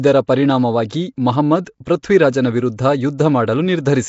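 Throughout the speech there is a rough, hissy halo and a smeared, underwater quality. Nothing is heard above 7.7 kHz. The damage is plainly audible. This is likely Nellymoser compression, the old Flash microphone codec, at a rate that sounds like about 32 kbps. It codes short blocks with a fixed, small bit budget. Weak bands get no bits and are filled with noise. That noise fill gives the hiss and the blur.

Pre-echo appears at 0.89, 1.65, 1.85 and 2.03 s. Each time, a short hiss comes just before a sharp attack. It lasts about 15, 18, 14 and 14 ms. The codec spreads its quantisation noise across a whole block. Here a loud onset falls late in a block. The noise sized for that onset also fills the quiet moment before it. The attacks sound soft and smeared.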